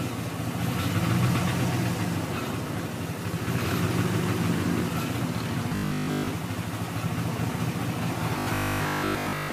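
Two stretches of robotic sound from repeated short buffers turn the audio into a stiff, metallic 50 Hz buzz, first from 5.69 to 6.27 s and again from 8.39 to 9.51 s. The likely cause is audio arriving too slowly, so the player keeps looping its last chunk for most of each stretch. A 50 Hz buzz fits a chunk about 20 ms long, and the skipped material is simply lost.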